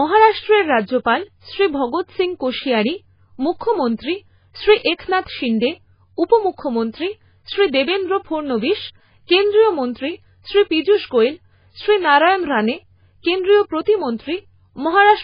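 From start to finish the speech sounds watery and swirly, with nothing above 5 kHz, most likely from heavy MP3 compression at a very low rate, something like 16 kbps. Starved of bits, the encoder cuts the treble and lets weak frequency detail flicker between frames.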